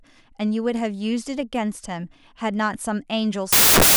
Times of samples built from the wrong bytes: 3.53-3.96

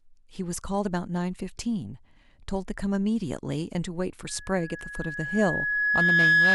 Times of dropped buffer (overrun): none

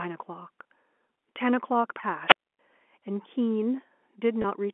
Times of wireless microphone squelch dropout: 2.26-2.59

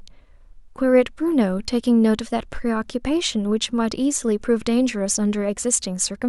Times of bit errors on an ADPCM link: none

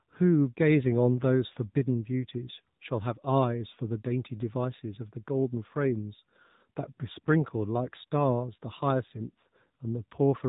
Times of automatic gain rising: none

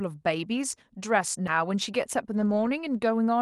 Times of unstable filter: none

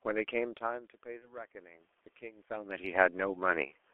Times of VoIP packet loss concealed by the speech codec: 1.20-1.35

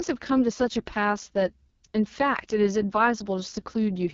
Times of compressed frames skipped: none

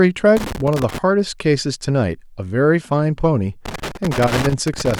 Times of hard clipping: none

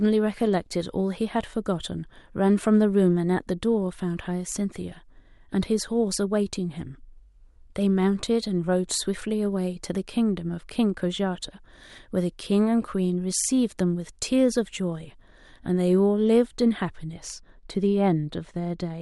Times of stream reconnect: none

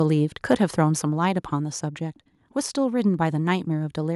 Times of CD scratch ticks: 1.63-2.35

